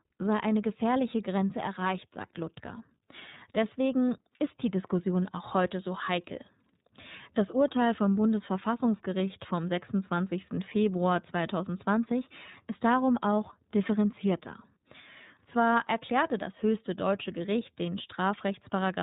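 Speech runs through the whole clip with the signature of the iLBC codec, audible from start to finish. Everything above 4 kHz is gone, leaving a narrowband, telephone-like timbre. The coding damage is plain: voiced sounds take on a rough, slightly synthetic edge. The pacing of the artefacts fits 30 ms frames each coded on their own, which points to the 13.33 kbps mode.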